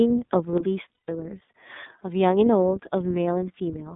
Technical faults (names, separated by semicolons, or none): iLBC codec; one channel drops out; lost iLBC frames